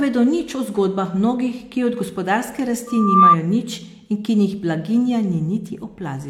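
A speech recording with a loudspeaker feedback squeal from 2.87 to 3.36 s. The mic is picking up the speaker it feeds, and at around 1.2 kHz the loop gain tips past one, so that single tone feeds itself and swells over a little under half a second. It peaks at about 10 dB above the speech before it stops, giving a sharp, whistling squeal.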